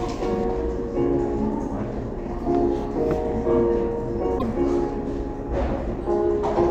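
From 0.44 s onward, the audio has de-emphasis applied wrongly. A treble cut meant to reverse pre-emphasis has been applied where none existed, or applied a second time. The high end slopes away smoothly, sitting about 8 dB lower at 10 kHz than at 1 kHz. The everyday sounds lose their crispness. Edges and textures turn soft, and the whole recording sounds dull and muffled until the end.

At 4.35 to 4.44 s there is damaged data in the compressed stream. For about 84 ms, the encoded frames are corrupt. The decoder misreads them, loses its place and hunts for the next valid frame header before playback settles. This comes through as a short glitch.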